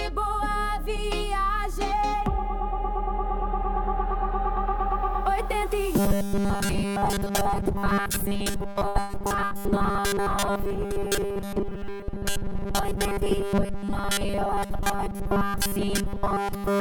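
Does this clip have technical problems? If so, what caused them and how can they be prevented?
Yes. From 5.99 s to the end there is a rigid 200 Hz buzz: robotic sound from repeated short buffers. Most of the time, a 5 ms fragment likely loops while the real audio is skipped. Give the playback or processing path enough buffer headroom so it never runs short of fresh audio.

Between 8.71 s and 9.54 s, repeated packet loss adds robotic, choppy sound: five gaps, the longest 80 ms, with about 180 ms missing. Unlike the steady buzz, this is broken and stuttering. Use a more stable network link, or a larger jitter buffer, so packets arrive in time.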